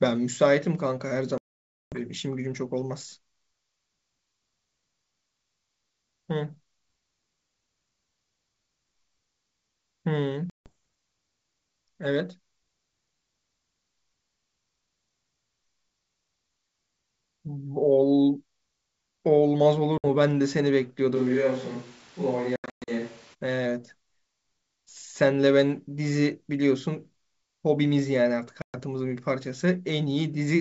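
A speech recording carried over a G.722 wideband call at 64 kbit/s keeps its clear top end up to 7 kHz, but the link drops packets five times, producing packet loss on an ADPCM call. At 1.38 to 1.99 s about 540 ms is lost. At 10.50 to 10.70 s about 160 ms is lost, at 19.98 to 20.05 s about 60 ms, and at 28.62 to 28.80 s about 120 ms. At 22.56 to 22.90 s, 260 ms is lost in scattered gaps across 320 ms, the longest run 120 ms. Each missing stretch is filled with silence, so the sound drops into abrupt, hard-edged holes. Because the decoder's adaptive predictor and step size no longer match the sender's, the speech comes back slightly rough, at times at a wrong level or with a click, then settles within some tens of milliseconds. From 21.17 to 23.33 s the close pickup likely gives way to a more distant microphone. The voice suddenly turns roomy and hollow with thinner bass, though its level barely changes and room noise sits about 25 dB below it. 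It snaps back just as abruptly at the end of that span.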